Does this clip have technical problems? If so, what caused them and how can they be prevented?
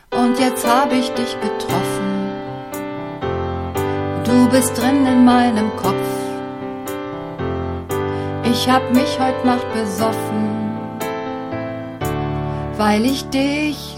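No, nothing technical stands out here, so there's nothing to trace back or guard against this time.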